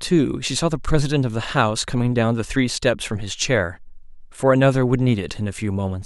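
No technical faults occur at any point in the recording, so there is nothing to describe in time order.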